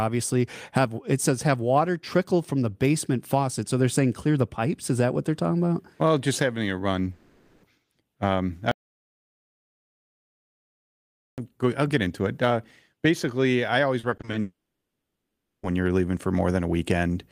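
After "just having a", from 7.11 to 7.65 s, a long network dropout likely occurs: the last sound is stretched into a fading buzz for the whole 0.52 s gap. From 8.71 to 11.38 s, just before "go I'll get into", an audio dropout to silence, likely from a lost input, leaves silence with no room tone. After "basically I", 13.99 to 14.35 s, repeated packet loss produces six short patched gaps, the longest 40 ms, giving a choppy sound with pieces missing. A second long network dropout likely follows at 14.41 to 15.65 s; the concealment buzz fades quickly, leaving about 1.1 s of silence.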